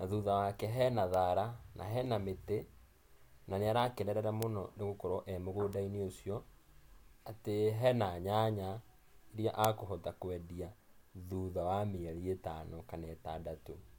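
At 1.14 s, between "thutha wake hena" and "thara na hena mĩtĩ", a bit error spike gives one sharp tick. A single flipped bit threw two samples to about -23 dBFS, and they snapped straight back. A louder tick, about -11 dBFS, follows "na nĩarakenerera" at 4.43 s. Another, about -23 dBFS, sits at 5.73 s. The strongest, about -5 dBFS, lands at 9.65 s, just before "akũhota kũendia". Each is broadband and unrelated to the speech.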